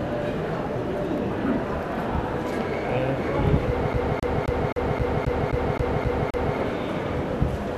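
From 3.93 s to 6.57 s the audio is caught in a CD stuck on one turn. A scratch keeps knocking the laser back a track, so a 264 ms slice repeats ten times, each jump marked by a brief mute. Its tight, metronomic evenness separates it from irregular network dropouts.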